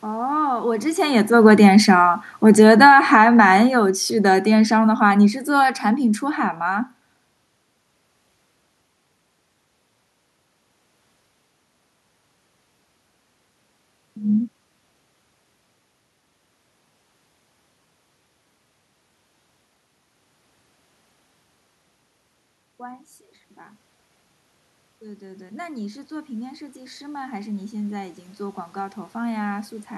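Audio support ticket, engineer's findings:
Automatic gain falling, 1.02–3.14 s then 3.74–6.28 s: level sinks by about 8 dB, then about 4 dB more, room noise dropping with it. AGC reacting to a loud start, gain stepped down gradually. Waveform envelope tapers; spectrogram darkens evenly, noise floor included.

Automatic gain rising, 25.0–29.8 s: speech and room noise swell together by about 8 dB over nearly five seconds. AGC lifting gain for quiet input. Waveform envelope widens steadily; spectrogram brightens across all bands, background rising in step. Level shifts near 0.5 s and 17 s follow talker movement, with the noise floor steady.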